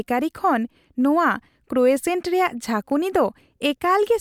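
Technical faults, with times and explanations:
No technical faults are present, and the speech signal holds steady with nothing in its level, timing or frequency content to point to a problem anywhere along its path.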